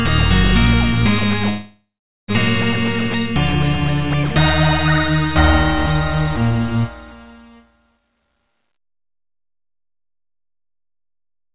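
Call audio freeze from 1.49 to 2.31 s in this everyday-sound recording: the last sound is carried on as a fading fill that ends in about 0.43 s of silence, inserting a gap with nothing lost, likely because delayed packets let the jitter buffer run empty. Jitter buffer speed-up from 7.91 to 11.53 s: the receiver repeatedly cuts pitch-period-sized pieces, roughly 0.7 s in all, so the sound runs at 118% speed with its pitch unchanged. Both faults pass through a call path that sounds like G.711 A-law coding, with nothing above 4 kHz.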